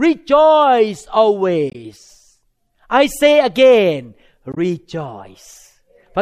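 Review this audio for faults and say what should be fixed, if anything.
Damaged data in a compressed stream shows up at 1.70–1.76 s and 4.52–4.58 s: corrupted frames make the decoder lose sync, giving a short chirp, click or hole. Worth verifying file integrity with checksums during transfer and storage.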